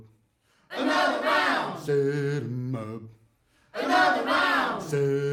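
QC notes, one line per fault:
No faults turn up anywhere in this music clip, so there's nothing here to log.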